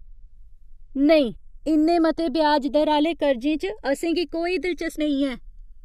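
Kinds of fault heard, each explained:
Channels drifting apart: the two channels run on clocks differing by roughly 100 ppm, so the delay between them slides up to under a millisecond. Summed to mono, comb notches sweep slowly across the spectrum, heard throughout this speech as slow flanging.
Compressed frames skipped: at 1.35 s, just before "इन्ने मते ब्याज दर", and at 4.98 s, after "गी कोई", whole 23.2 ms frames go unplayed, roughly 100 ms and 150 ms of audio. The speech jumps ahead at each join.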